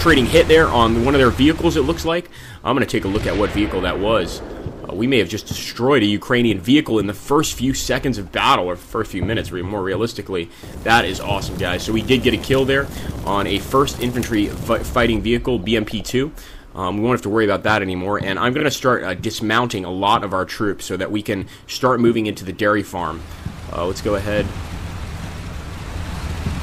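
At about 18.59 s there's a short stutter from repeated frames. A 52 ms chunk of audio, running to about 18.64 s, gets played a second time straight after itself, so you hear that little slice twice in a row. That points to a couple of compressed frames being written or sent twice, with the decoder playing them both times. It's a quick hiccup, and since nothing is dropped to make room, the clip ends up about 52 ms longer.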